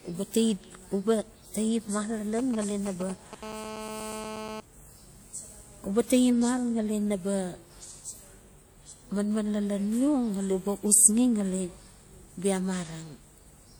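From 2.39 to 3.35 s there are GSM signalling bursts. A 2G phone close to the recording chain is sending brief groups of radio bursts while signalling, and the audio circuitry rectifies each burst into sound. It comes through as a galloping dit-dit-dit of short buzzes at about 217 Hz, roughly 10 dB under the speech. On a spectrogram these show as short clusters of vertical stripes spaced about 4.6 ms apart. The waveform shows matching packets of spiky pulses.

From 3.43 to 4.60 s the clip carries GSM phone buzz. The phone is now in a call and transmitting a burst every 4.6 ms, a rate of 216.7 Hz, and each burst is again rectified into the audio. The result is a hard, raspy buzz at about 217 Hz, about 10 dB below the speech and unrelated to it. On a spectrogram it forms a dense comb of horizontal harmonic lines at multiples of 217 Hz running the full 1.18 s. The waveform shows a regular train of sharp, square-edged pulses beneath the speech.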